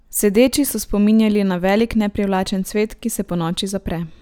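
At 1.80 to 1.82 s, right after "so spominjali na", there's a single loud pop sitting a few dB above the speech, likely a voltage spike from a plug, switch or static discharge.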